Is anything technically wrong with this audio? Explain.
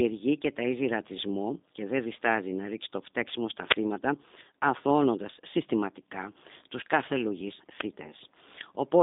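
Yes, the speech has been through a low-bitrate telephone codec. G.729 codec, throughout: resynthesis from a filter and sparse pulses, consistent with 8 kbit/s, leaves the speech plainly rough, synthetic and empty above 3.7 kHz.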